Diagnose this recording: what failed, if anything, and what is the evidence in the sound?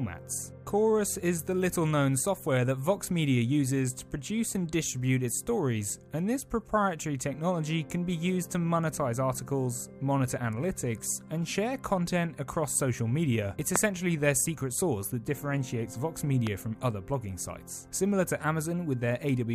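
Two loud pops hit at 13.76 s and 16.47 s, each a sharp burst of about 20 ms, peaking roughly 20 dB and 15 dB above the signal, with the audio carrying on underneath. Likely an analogue wiring fault: a voltage step from a plug, switch or static.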